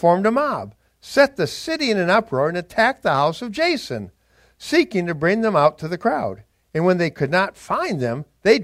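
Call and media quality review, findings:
No audible faults found on the speech path; nothing to attribute to any component.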